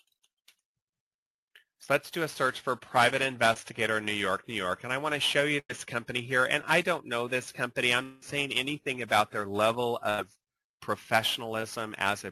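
At 3.53 to 3.56 s there is a short concealed packet loss. About 20 ms of audio never reached the decoder in time, and the receiver bridged the hole by extending the preceding sound for roughly 19 ms before blending back into the real signal. It is heard as a brief smear. The same short fault recurs at 6.61 to 6.64 s, where about 10 ms is missing and the fill runs about 14 ms, giving a brief wobble.

From 5.59 to 5.70 s a burst of packet loss removes about 100 ms of consecutive audio. The receiver continued the last sound for about 99 ms, turning it down as the gap went on, so the passage becomes a held, fading tone or hiss before the audio resumes further along with that stretch gone. A second burst at 10.10 to 10.19 s behaves the same way, with about 80 ms lost and roughly 86 ms of concealment.

Between 8.03 and 8.23 s the sound is replaced by a fading continuation of what came before, lasting about 189 ms, without reaching full silence. 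The audio then picks up further on, with about 190 ms of it absent. This is likely a long network dropout, caught before the concealment had decayed to silence.

A final short concealed packet loss at 11.61 s is a brief smear where about 10 ms was patched with roughly 9 ms of extrapolated sound.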